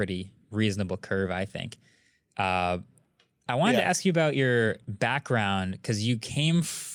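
A recording of speech with no technical faults to report. Nothing in it calls for a time or a cause.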